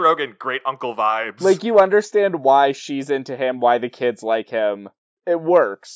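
Speech recording with no audible technical faults.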